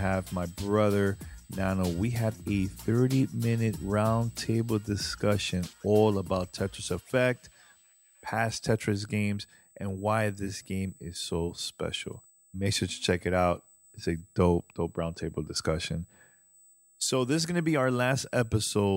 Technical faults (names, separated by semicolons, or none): USB whine